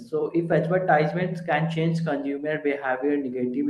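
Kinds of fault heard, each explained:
Clock drift between sender and receiver: the sender's clock runs roughly 5 percent fast, so the jitter buffer keeps overfilling. On a waveform, small trims appear at uneven spacing throughout.
Repeated timing corrections: from 0.19 s to the end, the receiver keeps cutting short pieces to keep pace, which gives slight hiccups. These show as tiny discontinuities at the splice points on the waveform and spectrogram.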